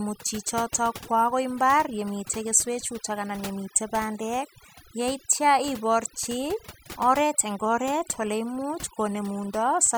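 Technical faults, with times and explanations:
Throughout: overdone noise removal. A noise reduction stage was set too aggressively on a noisy speech recording, so each frequency band that sat close to its noise estimate was pulled far down or off. With no steady background left, the background drops and breaks up into twinkling specks where isolated bands flicker on and off, and the softer parts of the voice are stripped away along with the noise.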